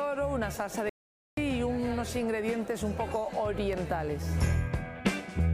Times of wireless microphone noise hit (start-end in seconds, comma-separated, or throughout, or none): none